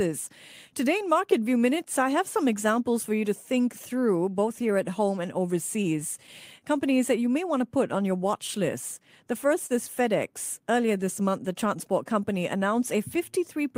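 From start to finish the timing wobbles, with small hiccups recurring at irregular intervals. This is clock drift between sender and receiver, with the sender's clock running roughly 3% slow. From 0.30 s to the end, the pace drags to 98% speed, adding around 300 ms overall. These are repeated timing corrections, in which the receiver repeats short pieces to keep the playout buffer fed. Between 3.62 and 4.37 s, again between 6.00 and 7.00 s, and between 8.47 and 9.72 s, roughly three brief ticks or smears occur in each stretch. The longest lasts a few milliseconds in the first two stretches and around 40 ms in the third. These are scattered short gaps, where lost or late packets were patched by continuing the last sound.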